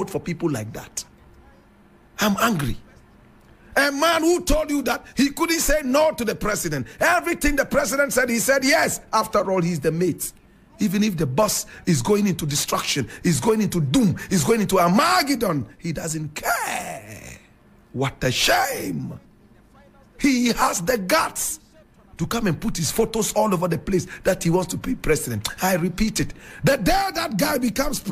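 Nothing stood out as a technical problem on listening to the audio.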